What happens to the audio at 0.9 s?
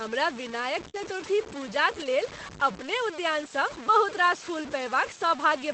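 A short concealed packet loss runs from 0.89 to 0.96 s. About 40 ms of audio never arrived, and the decoder extended the previous sound to cover it, leaving a brief smear.

Overlapping this, from 0.94 to 1.08 s, comes a lost packet rebuilt from error correction. About 80 ms was played from low-bitrate backup copies, which fits several lost packets. It sounds rougher and noisier.

Under both, a gritty, signal-following graininess is present. It is likely low bit depth without dither, consistent with roughly 5-bit truncation. Quiet moments turn coarse.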